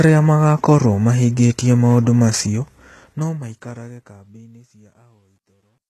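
Throughout the speech there is heavy codec damage. The likely cause is HE-AAC compression at a very low rate, around 16 kbps. Nothing sounds above 12.3 kHz. The treble is rebuilt from copied lower bands, so sibilants sound gritty and metallic.

From 2.36 s, just after "magaakorũo mahingĩtie maũndũ", a fade runs to the end with truncation distortion. The level steps are too coarse, fitting an 11-bit stage without dither. The waveform turns blocky. It sounds grittiest from 4.25 s to 5.9 s.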